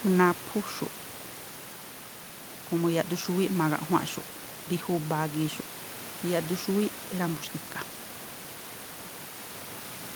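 Nothing stood out on listening to the speech; the only other sound is the room's own background noise, sitting about 17 dB below the speech.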